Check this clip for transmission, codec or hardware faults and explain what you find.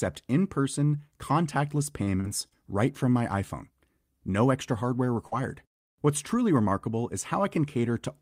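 The speech shows three kinds of network fault, all between about 2 and 5.3 seconds.

At 2.04–2.11 s and again at 2.48–2.54 s, the second just before "right from my", a sound is briefly held too long with a faint buzz or dip. This is a short stall from a late packet: the jitter buffer ran dry, so the receiver stretched the last sound by about 30 ms, then resumed exactly where it had paused. Nothing was lost, but the delay rose by about 30 ms each time.

At 2.20–2.27 s, also just before "right from my", and at 5.28–5.34 s, there is a brief smear. This is short concealed packet loss: about 40 ms never arrived, and the decoder filled the gap by extending the preceding sound before blending back into real audio.

From 3.34 to 3.71 s, right after "right from my", the speech sounds hurried but keeps its pitch. This is a jitter buffer speed-up: with excess audio queued, the receiver trimmed short pitch-period slices, about 40 ms in total, playing this stretch at 109% speed to cut the built-up delay.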